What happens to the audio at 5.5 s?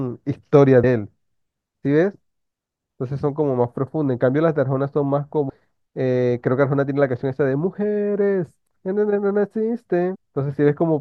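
At 5.49 s the speech jumps forward: compressed frames are skipped there. A run of encoded frames, about fifteen of them, never reaches the output, either because they are absent from the stream or because the decoder rejected them as corrupt. With a 24 ms frame, roughly 300 ms of audio disappears in one step.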